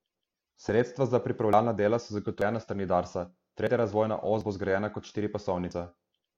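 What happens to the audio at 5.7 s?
A dropped buffer (overrun) at 5.71 s, most likely from the recording software failing to collect its samples before the audio hardware overwrote them. Roughly 50 ms of speech is lost, and the audio on either side is spliced straight together with no gap of silence. It is heard as a sudden jump forward in the speech, as though a small piece of it had been snipped out.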